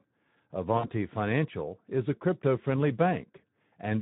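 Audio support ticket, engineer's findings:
Speex codec throughout. Hoarse, noisy excitation with audible codec damage across the speech. Coarse CELP coding, consistent with a Speex setting around 11 kbps.

VoIP packet loss concealed by the speech codec, 0.77 to 0.88 s. Stretched sound fading out, then weak recovery. Decoder extrapolated over roughly 60 ms of lost packets.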